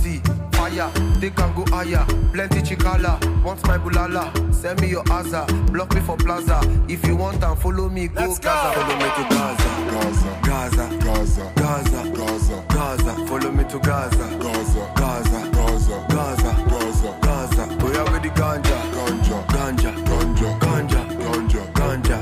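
No technical faults can be heard anywhere in the audio.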